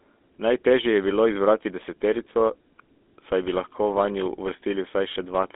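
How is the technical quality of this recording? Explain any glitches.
The quality is poor: the speech carries GSM full-rate codec damage from start to finish. Its pulse-driven vocal-tract model leaves a buzzy, gravelly roughness, unlike plain telephone band-limiting, with nothing above 3.8 kHz, which fits a 13 kbps stream.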